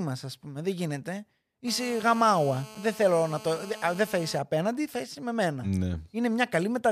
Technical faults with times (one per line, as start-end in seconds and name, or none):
1.68-4.38 GSM phone buzz